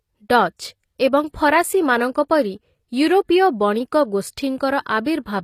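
From start to finish the speech has gritty, metallic s sounds, with nothing above 14.9 kHz. That points to HE-AAC compression as the likely cause, its treble rebuilt from copied lower bands, which fits a low bitrate of around 24 kbps.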